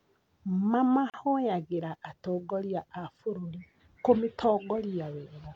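A gap at a join of encoded pieces opens at 1.10 s: about 37 ms of silence, from untrimmed encoder delay and padding where 4-second pieces meet, then the speech resumes where it stopped.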